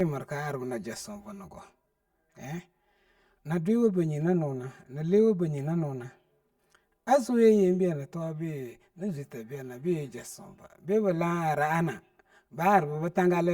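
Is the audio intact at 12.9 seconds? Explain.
No. Channel delay (comb filtering) affects the whole speech clip, including 12.9 s. One channel lags by about 5 ms, and summing to mono cancels evenly spaced frequencies from around 100 Hz, so the sound is hollow and phasey.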